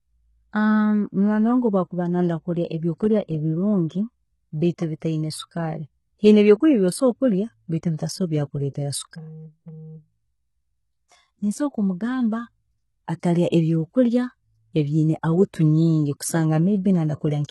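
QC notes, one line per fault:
Throughout: HE-AAC compression. The speech is heavily degraded, with gritty, metallic s sounds because the treble is rebuilt from copied lower bands, likely a low-rate HE-AAC encode near 16 kbps. A spectrogram shows blocky, repeated upper harmonics and nothing above 11.8 kHz.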